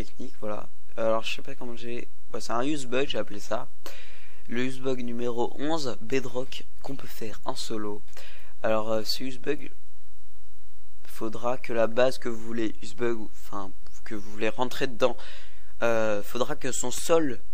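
No technical faults can be heard anywhere in the recording.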